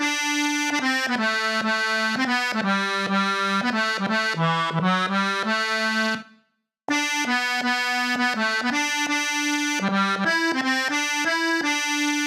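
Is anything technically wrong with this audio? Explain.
Yes. For the whole clip, the sound is hurried and sharp. It runs one and a half times faster than it should and sits about 7 semitones too high, roughly a fifth up. This is a wrong sample rate fault. The samples were played back at a faster rate than the one they were captured at, with no conversion, so speed and pitch rose together by the same ratio. A 1.5 ratio fits material recorded at 32 kHz being played at 48 kHz.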